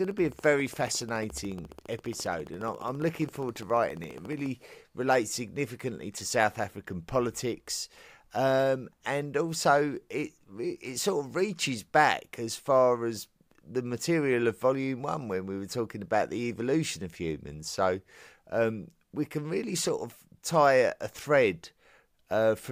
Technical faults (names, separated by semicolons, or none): train of clicks